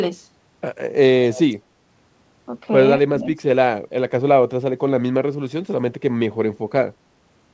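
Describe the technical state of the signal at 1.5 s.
At 1.5 s you're right inside a short echo leak that runs from about 1.32 to 1.56 s. A faint, delayed copy of the speech trails the original by roughly 190 ms, sitting well down, around 20 dB under the main signal. The likely cause is a far-end speakerphone whose echo canceller let a bit of its own mic pickup slip back into the call. The whole thing is band-limited to 8 kHz by the call codec.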